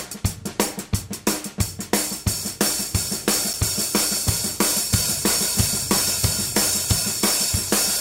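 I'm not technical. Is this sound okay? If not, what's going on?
No. At about 6.86 s there is a repeated buffer: the playback device briefly ran out of fresh audio, so it played the last tiny slice again four extra times. Each slice lasts only about 1.3 ms, which points to a very small buffer of around 64 samples. Repeated that quickly, the slice doesn't sound like a stutter but like a short click or brief buzz. Essentially none of the sound goes missing.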